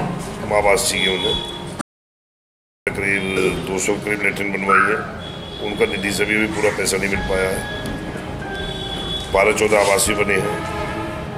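At 1.81 s the sound cuts off abruptly into silence until 2.87 s, a gap of about 1.06 s with no room tone at all. That empty floor, rather than a quiet stretch or muffling, marks an audio dropout to silence, likely from the input being lost while recording continued.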